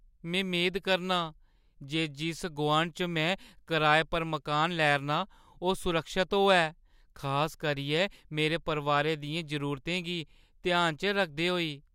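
Speech recording with no audible technical faults.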